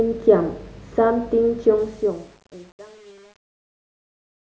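From 1.78 s to the end at 4.46 s, the speech fade-out shows truncation distortion: the gain stage drops low bits without dither, consistent with 8-bit resolution. From about 2 s the fade grows gritty and stepped through 4.46 s.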